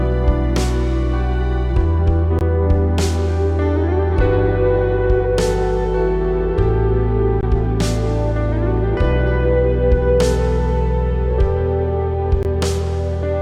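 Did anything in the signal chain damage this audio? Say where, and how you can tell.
Yes: a gap between chunks, where the audio was handled in 5-second blocks for transfer or playback. Hard-edged 20 ms silences appear at 2.39–2.41 s, 7.41–7.43 s and 12.43–12.45 s, each 5 s apart, interrupting the sound at every join without losing any.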